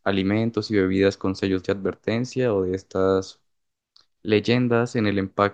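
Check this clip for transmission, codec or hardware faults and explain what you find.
Nothing stood out on listening to this speech recording that would point to a problem in how it was transmitted, encoded or captured.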